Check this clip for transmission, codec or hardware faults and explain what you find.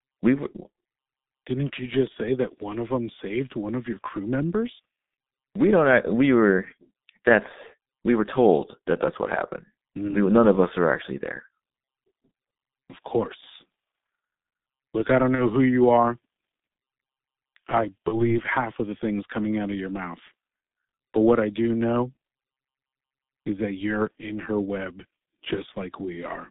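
Two faults are present: G.723.1 codec damage across the whole speech clip, and two brief VoIP packet losses concealed by the speech codec.

The G.723.1 codec runs throughout. The band sits between roughly 150 Hz and 3.7 kHz, and the coarse, hoarse texture with smeared consonants fits a rate of about 6.3 kbit/s. The codec rebuilds speech from a slowly updated vocal-tract model in 30 ms frames, so fast detail is lost. On a spectrogram, the energy cuts off sharply near 3.7 kHz, and the harmonics look blotchy in frame-sized blocks.

The VoIP packet loss concealed by the speech codec occurs twice. The first runs from 15.35 to 15.41 s, between "I don't" and "who you are". The second runs from 18.08 to 18.33 s, just before "half of the things". Each fits one lost 30 ms frame. The decoder carried its last pitch and filter forward at falling gain, producing a short buzzy tone or coloured noise that fades. 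Because later frames build on that state, the voice stays weak or distorted for tens of milliseconds or more after packets return. The waveform shows a repetitive, decaying stretch, and the spectrogram shows flat, frozen harmonics.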